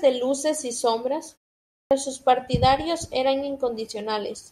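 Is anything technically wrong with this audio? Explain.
Yes. At 1.76 s, speech resumes after a pause of about half a second with a clipped start: roughly the first 150 ms, through 1.91 s, is missing, so the sound jumps in abruptly with its opening cut away. The output device appears to idle during the silence and needs time to wake or relock, swallowing the onset. Muted pauses would silence only the gap itself and lose nothing; here the speech itself is truncated.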